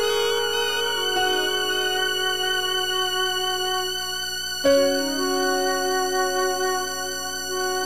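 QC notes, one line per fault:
Throughout: video or display buzz, a 60 Hz field-rate buzz with hash above, roughly 25 dB below the music; the spectrogram shows steady horizontal lines at 60 Hz multiples.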